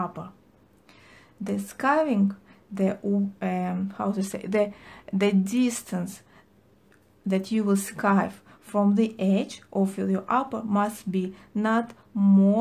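Nothing in the audio stood out as a technical fault on listening.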